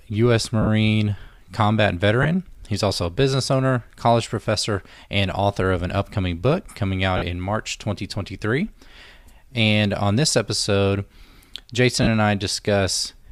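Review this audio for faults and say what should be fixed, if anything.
Lost LE Audio frames break up the speech four times: 0.62–0.67 s (50 ms), 2.23–2.25 s (20 ms), 7.17–7.22 s just after "an upcoming book coming" (50 ms), and 12.03–12.07 s (40 ms). Each gap fits a run of 10 ms frames going missing. The LC3 decoder fills them by repeating the last spectrum with scrambled phase, so voiced sound turns into a brief hiss. On a spectrogram, harmonics blur into noisy vertical smears; the waveform shows irregular, slightly decaying fill instead of clean periodicity. To prevent it, strengthen the Bluetooth link with shorter range, less 2.4 GHz interference and more retransmissions.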